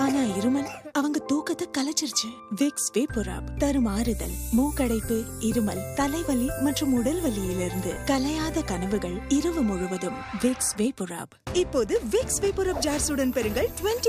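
No faults turn up anywhere in the recording, with nothing to flag at any point along the timeline.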